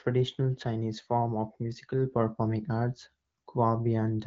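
Nothing stood out on listening to this speech.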